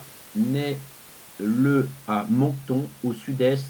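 Speech recording with no technical faults, the only background being ordinary room noise about 27 dB below the speech, which belongs to the recording space rather than to the signal chain.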